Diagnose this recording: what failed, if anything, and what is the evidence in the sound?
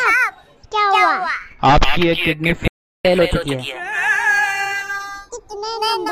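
Channels drifting apart, at the converter clock stage. The two channels run on clocks about 40 ppm apart. The delay creeps to roughly a fifth of a millisecond, giving slow flanging.

Playback stall at the player. The audio goes silent from 2.68 to 3.05 s, about 0.37 s, then resumes. Data starvation or a blocked playback thread is the likely cause.

Catch-up at higher speed, also in playback. From 3.05 to 5.50 s the audio runs at 1.15 times speed, about two semitones sharp, recovering lost time.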